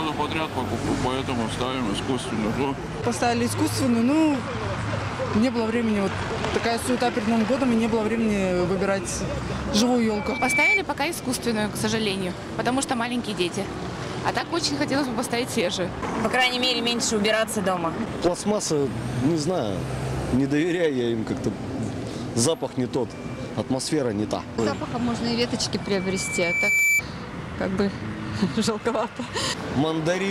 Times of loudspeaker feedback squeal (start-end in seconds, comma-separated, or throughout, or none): 10.11-10.80, 25.82-27.02